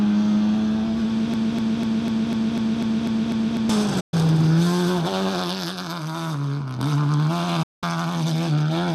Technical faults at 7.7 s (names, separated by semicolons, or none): digital broadcast dropout